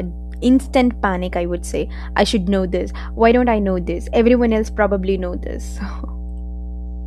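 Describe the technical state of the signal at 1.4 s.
A steady, fairly loud low buzz sits under the speech at 1.4 s, roughly ten decibels below it, and it runs through the whole clip. This is mains hum at 60 Hz, where a ground loop or a nearby transformer leaks the power-line frequency into the signal.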